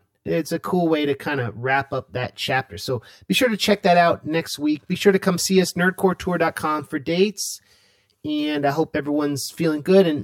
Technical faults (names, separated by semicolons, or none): channel delay (comb filtering); corrupt frame decoded